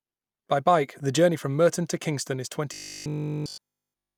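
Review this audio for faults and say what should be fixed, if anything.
From 2.74 s to the end of the clip at 4.18 s, the speech turns into a rigid, metallic 50 Hz buzz. This is robotic sound from repeated short buffers. The likely cause is new audio arriving too seldom, so the playback side keeps repeating the last chunk while the real audio is skipped. A 50 Hz repeat rate fits a 20 ms buffer, and essentially the whole stretch is made of repeats. Unlike mains hum, which also sits at 50 Hz, this buzz replaces the speech rather than sitting steadily under it, and it still loosely tracks the rhythm of the words. To prevent it, make sure audio is delivered fast enough, with enough buffering headroom that the playback side never runs dry.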